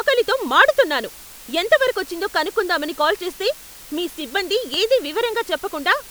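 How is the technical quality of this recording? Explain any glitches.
The technical quality is poor, with two faults in the speech. Low bit depth with dither runs throughout, and a single loud pop interrupts it near the end.

Low bit depth with dither, throughout: too few bits cause rounding, and dither turns that error into a steady, even hiss about 20 dB below the speech, which fits a 7-bit signal.

Loud pop, 4.74 to 4.76 s: a single sharp pop peaks roughly 5 dB above the speech, which continues underneath. The pop is likely from a sudden voltage pulse such as a switch or static discharge.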